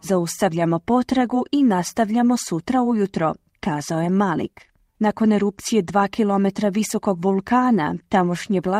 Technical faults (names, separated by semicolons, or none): none